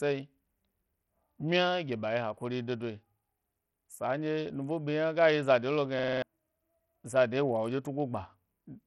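All the way through, the speech has dull, flickery treble and a gritty grain, likely Bluetooth SBC compression squeezed hard, which fits something around 64 kbps. Then from 5.99 to 6.22 s there's a system hang loop: a 46 ms chunk repeats five times, a buzzy stutter at about 21.5 Hz that fits a 2048-sample buffer, and roughly a fifth of a second of real audio goes missing.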